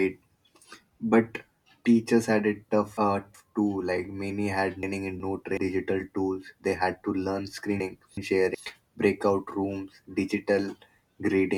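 A roughly 0.37 s chunk of speech was delivered late and played after its successors, so chunks out of order appear at 1.86–3.34 s (three chunks late), 4.83–5.57 s and 7.80–8.55 s (one chunk late each). Each moment sounds jumbled.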